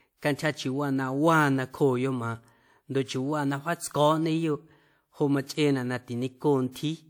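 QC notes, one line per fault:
6.72–6.75 s, pre-echo: a hiss arrives roughly 39 ms ahead of a sharp speech onset near the end of the clip, and the attack itself lands softened rather than crisp. The transform codec spread its quantisation noise across the whole block, so noise scaled for the loud onset also covered the quiet stretch before it. The result is a brief smear that precedes the transient instead of following it.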